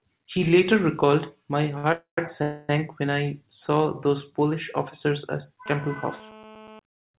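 At 1.78 s a short stall from a late packet holds the sound for about 55 ms, until 1.85 s. A packet arrived after it was due, the jitter buffer emptied, and the receiver stretched the last sound until the audio resumed where it left off. Nothing is lost, but one sound lingers with a faint buzzy dip. On a spectrogram it shows as a brief smear of repeated harmonic texture, and the waveform shows a slightly sagging, repetitive stretch.

Two call audio freezes follow, from 1.93 to 2.18 s and from 2.42 to 2.70 s, each roughly a quarter of a second long. The likely cause is packets held up in transit, which drained the buffer. Each time the last sound is continued as a fading buzz. In the first freeze it dies to about 120 ms of silence, and in the second it never fully goes quiet. The speech then carries on intact but later. A spectrogram shows flat, decaying horizontal bands, with a blank gap in the first freeze. 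The waveform shows a tapering envelope.

From 5.66 to 6.79 s, right after "officers at", a GSM phone buzz appears. A nearby 2G handset in a call transmits in bursts about 217 times a second, and the audio circuitry rectifies those pulses into a hard, raspy 217 Hz buzz, about 22 dB below the speech and unrelated to it. A spectrogram shows a dense comb of evenly spaced harmonic lines running straight across the band, which ends at 4 kHz as expected for the G.711 call path. The waveform shows a regular pulse train riding under the signal.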